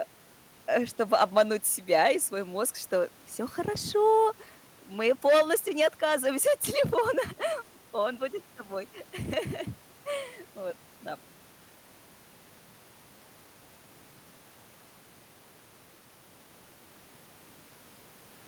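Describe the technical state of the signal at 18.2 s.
At 18.2 s the speech signal is intact, with no dropout, distortion or other technical fault audible at that moment.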